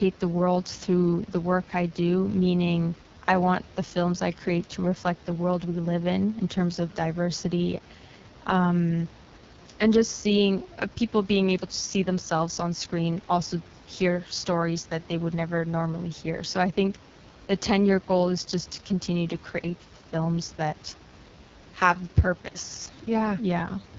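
From start to finish, the speech passes through the AMR wideband (HD Voice) codec at its lowest rate, 6.6 kbit/s. At that rate the encoder has too few bits to model the voice well. It rebuilds each sound from a coarse pulse pattern through a vocal tract filter. The result is heavy damage: rough, raspy speech. Nothing remains above about 7.3 kHz, so the top sounds dull. The room noise sits about 22 dB below the speech.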